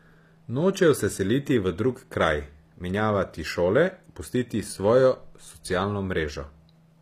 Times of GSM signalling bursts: none

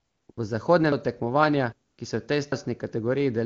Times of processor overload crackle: none

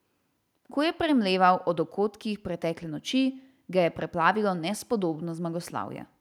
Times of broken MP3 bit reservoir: none

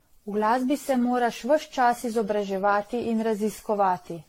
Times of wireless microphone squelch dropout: none

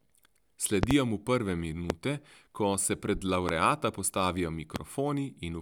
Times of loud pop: 0.83-0.93, 1.90-1.93, 3.49-3.52, 4.76-4.78

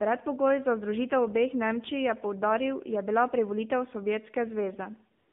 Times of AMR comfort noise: 5.18-5.33

